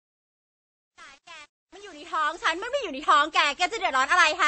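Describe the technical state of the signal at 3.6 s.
At 3.6 s, the speech carries transcoding between lossy codecs throughout the clip. Nothing sounds above 8.3 kHz, and coarse low-rate smearing sits under WMA-style swirl, which points to a likely MP3-then-WMA chain with the harsher first stage's losses preserved.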